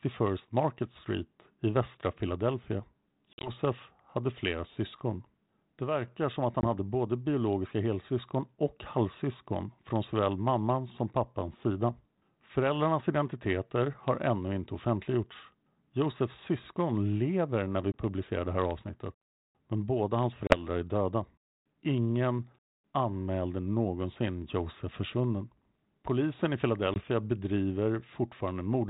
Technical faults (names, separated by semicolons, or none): packet loss on an ADPCM call